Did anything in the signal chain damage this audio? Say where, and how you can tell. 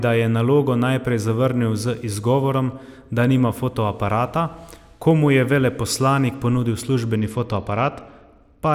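Yes. At 7.16 s, running through to the end of the speech, there's a Bluetooth SBC bit pool drop at the codec stage. The top end goes dull and gritty noise creeps in, which fits the bit pool sinking from 28 to about 11, roughly 90 kbps, on a congested link.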